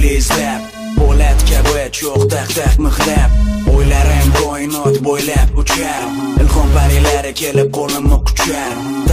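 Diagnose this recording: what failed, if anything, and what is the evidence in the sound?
Listening through this recording, nothing stood out as a fault at any stage of the chain.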